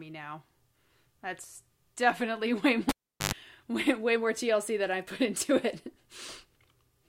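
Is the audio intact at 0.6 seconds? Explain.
Yes, the speech at 0.6 seconds is intact, with no fault at that moment.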